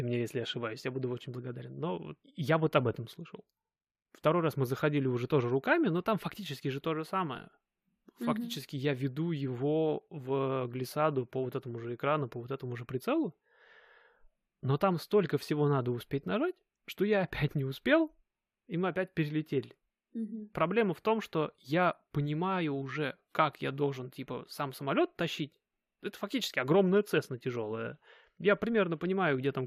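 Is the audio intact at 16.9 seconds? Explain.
Yes, the speech at 16.9 seconds plays through intact, with no audible dropout, click, distortion or other fault at that moment.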